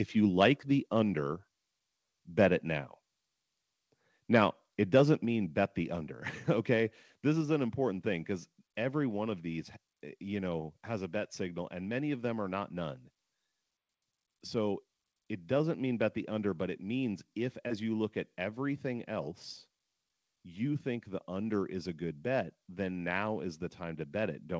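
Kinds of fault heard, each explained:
Microphone volume stepped down: at 5.25 s, just before "bet the", speech and background drop together by about 4 dB in one instant and stay at the lower level. The likely cause is the call software cutting the microphone's input volume. A compressor or automatic gain control rides the level up and down with the speech and pumps audibly. This is a single clean step with no recovery, heard over audio that carries nothing above 8 kHz.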